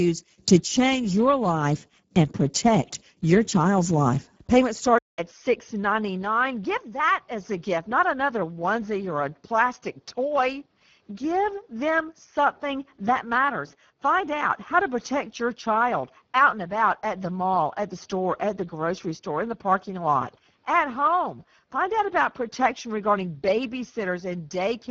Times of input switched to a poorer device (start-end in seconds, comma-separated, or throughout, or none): 4.98-24.90